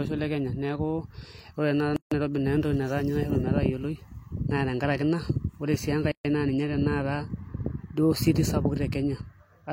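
Twice in this speech clip the sound drops into a short dead silence with abrupt, smeared edges, then picks up exactly where it stopped: from 1.96 to 2.12 s, about 150 ms, right after "ore naa", and from 6.12 to 6.25 s, about 133 ms, between "tenkaraki ina ore sii" and "naa ninye". These are gaps at a join of encoded pieces, roughly 4 s apart. The audio was encoded in separate segments and joined without trimming, so each segment's encoder start-up delay and final-frame padding remain as silence.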